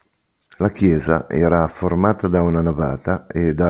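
Nothing stood out on listening to this speech, which comes through a call path whose G.711 mu-law coding leaves nothing above 4 kHz.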